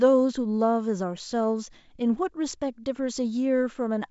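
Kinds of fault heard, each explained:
No faults can be heard in this speech recording. It carries the sound of a G.722 wideband telephone link at 64 kbit/s, with the band ending near 7.7 kHz and at most a faint trace of the coding.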